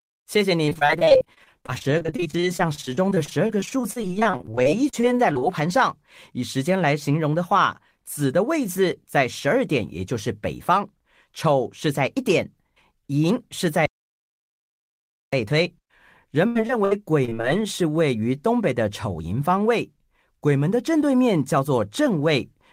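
From 0.65 to 5.43 s the speech breaks up with repeated packet loss: dozens of brief holes, none longer than about 34 ms, each patched by stretching the preceding sound. Concealment covers roughly a quarter of the stretch, giving a choppy texture with pieces missing. A second, shorter burst runs from 16.47 to 17.45 s, with a handful of gaps up to 76 ms and a similar share concealed. Unlike a true dropout, these holes never go silent; they are filled with smeared, repeated sound.

From 13.86 to 15.33 s there is an audio dropout to silence lasting about 1.47 s. The speech stops mid-flow and resumes just as abruptly, with flat digital silence in between and no room tone. That absence of room tone sets it apart from a pause or from packet-loss concealment: nothing fills the gap, which points to a lost input or link, with the encoder likely writing silence until the signal returned.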